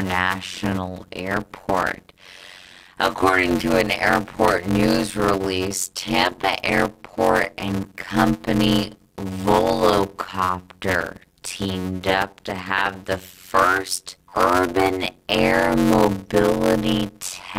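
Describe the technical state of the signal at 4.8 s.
At 4.8 s the speech carries a steady buzz near 91.9 Hz and runs at about 0.53 times normal speed, timbre unchanged. This is block size mismatch (padded) throughout, consistent with 256-sample blocks zero-filled to a larger read size.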